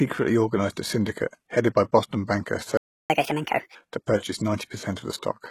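It's a short speech recording, and the whole thing has that gritty, lispy top end where the s sounds come out metallic. That's the signature of HE-AAC compression, likely at a low rate that fits something around 16 kbps, where only the lower band is properly coded and the treble is rebuilt by copying lower bands upward, so the harmonics up there don't match the originals and the damage is plainly audible. At 2.77 s the sound just cuts out mid-flow and stays silent until 3.10 s, roughly a third of a second. That's a playback stall, most likely where the player ran dry of data or got held up and had nothing to output until it recovered. Right after, from 3.10 s to 3.75 s, the audio runs at 1.5 times normal speed, with the pitch jumping up by about seven semitones, so it sounds chipmunky for a moment before snapping back. That's catch-up at higher speed, where the player resamples its backlog faster to win back the time it lost during the stall and then drops back to normal rate once it's caught up.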